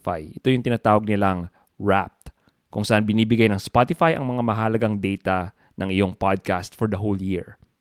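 Nothing in this speech recording points to a technical fault: the signal holds steady throughout, with no sign of interruption, distortion or level trouble.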